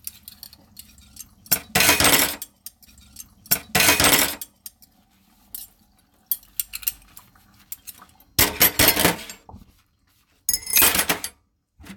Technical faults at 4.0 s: stream segment repeated

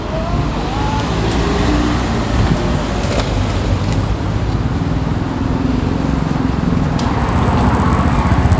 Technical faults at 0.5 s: none

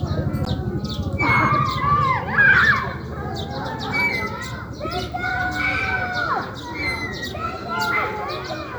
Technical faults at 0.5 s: Bluetooth stall

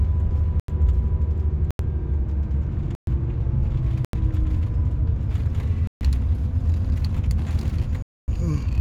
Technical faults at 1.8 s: block of digital silence

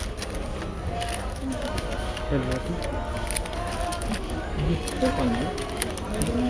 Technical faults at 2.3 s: none

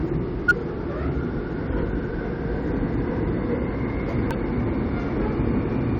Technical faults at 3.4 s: none

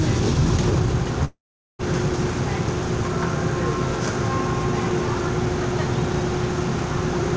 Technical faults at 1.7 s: long network dropout

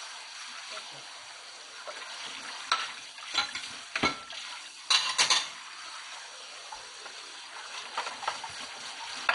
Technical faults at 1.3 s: MP2 compression

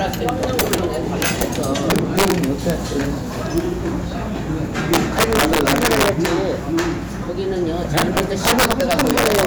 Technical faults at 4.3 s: none

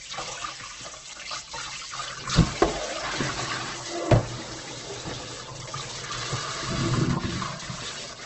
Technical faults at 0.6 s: Opus compression

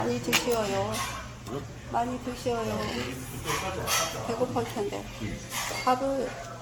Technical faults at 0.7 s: generation loss

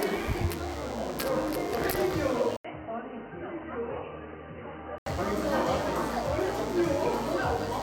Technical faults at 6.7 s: DECT cordless phone buzz

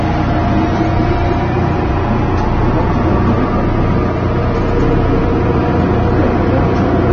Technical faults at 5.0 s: hard clipping; AAC compression

